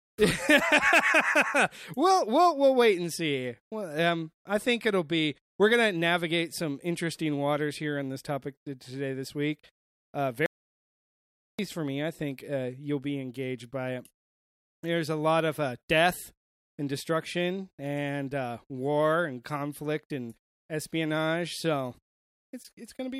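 At 10.46 s the speech drops out to dead silence until 11.59 s, an audio dropout to silence of about 1.13 s, likely from the input briefly disconnecting.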